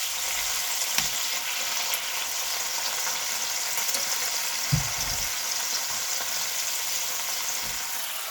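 The clip is a recording of sounds, and nothing is technically wrong with it.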